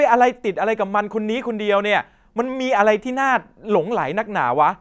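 No technical faults are audible anywhere in this speech recording.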